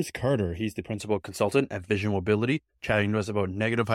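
From 0 to 1.0 s, before "consultant at", channel delay causes comb filtering. One channel trails by under half a millisecond. The mono sum sounds hollow, notched near 1.5 kHz.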